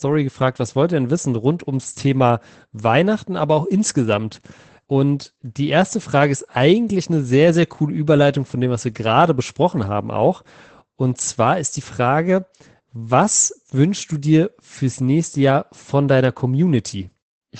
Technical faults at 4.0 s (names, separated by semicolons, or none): Opus voice compression